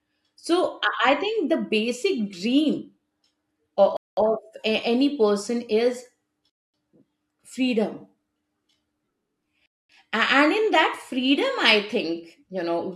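The speech drops to complete silence three times: at 3.97 s for about 205 ms, at 6.50 s, just after "person is", for about 240 ms, and at 9.66 s for about 233 ms. Each gap is a clean cut with no noise or fading. The pattern points to a Bluetooth stall, likely from radio interference delaying packets until the headphones' playback buffer emptied, so audio paused until the retransmitted data arrived.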